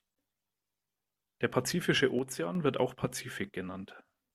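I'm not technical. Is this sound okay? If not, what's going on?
No. From 2.19 to 2.55 seconds the speech suddenly drops in volume for about a third of a second, then snaps back. That's likely a case of one channel drops out: one side of the stereo signal briefly vanishes, so the combined sound loses half its strength.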